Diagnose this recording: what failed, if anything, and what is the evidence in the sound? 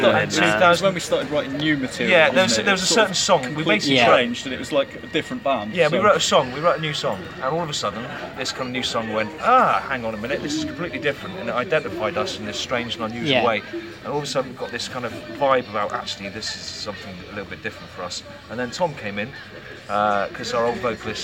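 Nothing failed at any stage here: there's no glitch, dropout or distortion to point to anywhere in the recording.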